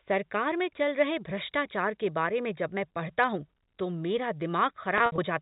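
Speech clip with packet loss with pitch repetition between 4.98 and 5.18 s: about 100 ms lost across 200 ms, longest gap 60 ms, bridged by repeating the last pitch period, giving a held, buzzy tone.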